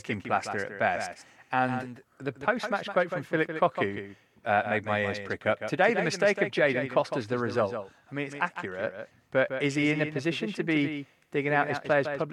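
A second, slower capture path or an out-of-step edit has most likely mixed this speech recording in twice, leaving a doubled audio track that runs from start to finish. A full-band copy trails the original by roughly 150 ms, sitting around 10 dB lower, so every syllable is shadowed by a faint, distinct repeat. Unlike a room reflection, the copy carries no decay or reverberant colouring, just the same dry sound arriving late.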